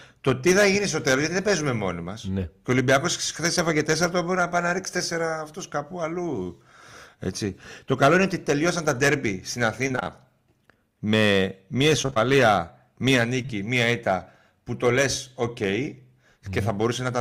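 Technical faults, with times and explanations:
6.43–6.51 s, short concealed packet loss: two back-to-back holes of about 20 ms each were bridged by extending the preceding sound and blending back in. This gives a brief smear or wobble. Unlike the robotic stretches, it is one momentary blip, not a choppy run.
9.88–10.07 s, repeated packet loss (robotic sound): several holes of up to 23 ms, about 100 ms in all, leave nearly half of this short span as patched continuation. Each fill barely ends before the next begins, giving a dense, choppy texture instead of one isolated smear.
12.02–13.52 s, repeated packet loss (robotic sound): the same mechanism, spread thinner. About 120 ms is missing across 1.5 s, only about 8% of the span, with gaps of up to 23 ms. It is heard as intermittent chopping, milder and more scattered than the burst near 10 s.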